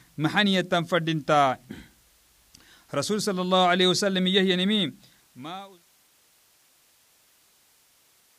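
Nothing technically wrong turns up in this speech recording, and the level simply eases down in a smooth editor-style fade-out from roughly four and a half seconds to silence at 5.91 s.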